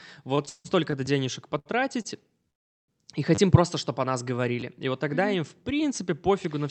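From 0.35 to 0.95 s the speech has repeated stalls (stutter). Packets keep arriving late, the jitter buffer empties four times, and the receiver stretches the last sound to cover the waits, the longest about 157 ms. Nothing drops out, but the passage drags and stutters. Unlike a single late packet, the holds recur in quick succession.

A repeated buffer is heard at 1.06 s. New audio did not arrive in time, so the device replayed the last buffer, which fits a 10 ms buffer. Each one is a hard-joined repeat heard as a click or brief buzz, not a smooth stretch. The same fault returns from 3.35 to 3.38 s, where the piece sounds three extra times and gives a short buzzing stutter. It occurs again at 4.61 s and at 5.96 s.

A short stall from a late packet comes between 1.59 and 1.81 s, where a sound is held about 70 ms too long with a slight buzz or dip. A shorter one at 2.02 to 2.06 s adds about 20 ms. 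The speech then resumes where it left off. Each is a single held sound rather than a stutter.

From 2.50 to 2.90 s the call audio freezes. The last sound is held briefly, then gives way to roughly 370 ms of silence before the speech carries on with nothing missing. The likely cause is packets held up on the way, which emptied the jitter buffer. Its length and silence set it apart from the short stalls.

All of this comes through the Opus call path, whose band stops near 8 kHz.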